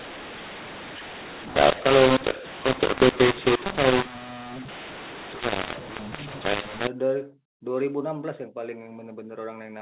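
From the start to 6.87 s the speech is harsh and gritty, with levels jumping unevenly and hiss filling the pauses. This is mu-law and A-law mixed up: mu-law samples were decoded as A-law, scrambling the level mapping and lifting near-silent samples well above zero.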